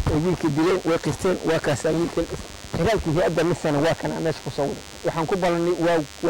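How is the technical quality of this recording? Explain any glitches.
The recording is marred by a single fault running through its whole length: DECT cordless phone buzz. A nearby DECT handset or base station transmits a short radio burst every 10 ms, and the audio circuitry rectifies it, producing a steady, thin buzz at 100 Hz. It sits roughly 20 dB below the wanted sound. It differs from mains hum, which is a smoother tone at 50 or 60 Hz. Here the sharp pulse repetition gives a raspy, harmonic-rich edge.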